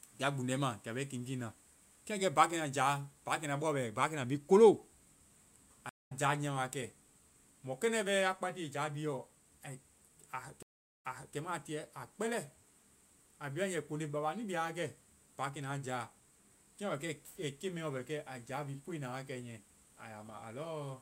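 At 5.89 s a stream reconnect drops the speech out for 188 ms. It returns about 150 ms later, skipping a little. At 10.63 s another reconnect goes silent for 391 ms. It then resumes 340 ms earlier, repeating audio until 11.36 s.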